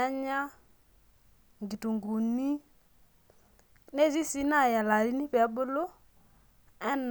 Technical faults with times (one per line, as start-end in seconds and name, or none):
none